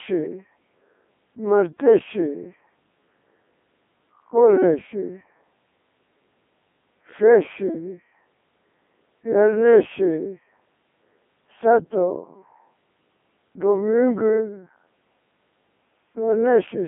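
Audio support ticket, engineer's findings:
Codec 2 vocoder, whole clip: speech passed through a low-rate parametric codec, consistent with its 3.2 kbit/s mode. Only pitch, voicing, energy and spectral envelope survive; decoder resynthesises from sine waves. Result: heavy robotic, buzzy speech, band-limited to roughly 150 Hz to 3.5 kHz.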